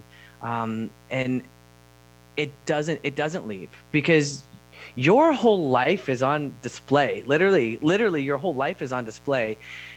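Interference from the 60 Hz mains supply leaks into the signal path throughout the recording, arriving as sharp spikes twice per cycle. The result is mains buzz: a steady, raspy drone, its harmonics reaching well up into the kilohertz range, sitting roughly 30 dB below the speech.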